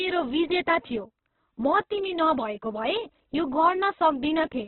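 From start to end, the speech has nothing above about 4.1 kHz, so it sounds narrow and boxed in. The tone is rough and grainy, with a hissy texture where detail should be. The cause is likely Opus compression at a very low bitrate, around 8 kbps by the sound. In its music mode the codec keeps each band's energy but fills starved bands with noise or folded copies. That turns clean tone into grit.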